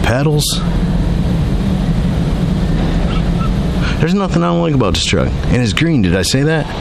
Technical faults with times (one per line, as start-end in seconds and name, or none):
none